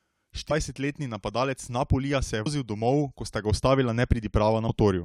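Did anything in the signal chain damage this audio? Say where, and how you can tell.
Yes: short squawks at 2.45 s, just after "se je", and at 4.68 s come from damaged data in a compressed stream at the codec stage, where the decoder lost sync and resynchronised.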